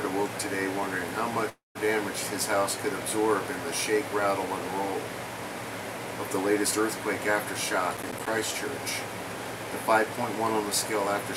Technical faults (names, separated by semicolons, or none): long network dropout; processor overload crackle